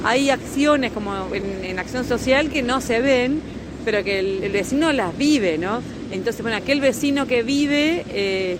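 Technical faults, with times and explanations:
Throughout: clock drift between sender and receiver. The pacing feels faintly unsteady from start to finish. The sender's clock runs roughly 3% slow relative to the receiver's, so the jitter buffer keeps draining and the receiver must stretch the audio to keep pace.
0.15 to 8.47 s: repeated timing corrections. Small hiccups recur at uneven spacing, with the audio running at about 98% speed. The receiver repeats short pieces, all in the same direction, adding around a fifth of a second overall to make up for the slow sender.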